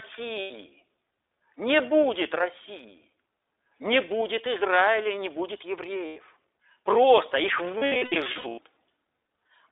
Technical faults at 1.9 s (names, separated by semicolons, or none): iLBC codec